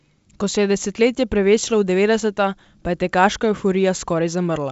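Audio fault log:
No faults heard.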